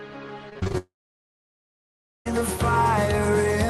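From about 0.49 to 0.76 s there's repeated packet loss (robotic sound): six short holes, the longest around 26 ms, each patched by stretching the last bit of sound. Nearly half that stretch is concealment, so it comes across choppy.

Right after, from 0.78 to 2.27 s, the audio drops out almost completely, most likely a long network dropout. There's a brief fading buzz or hiss as the receiver extends the last sound, then roughly 1.4 s of silence before the audio resumes with that section simply gone. The top end sits near 12 kHz, which fits a call codec like Opus.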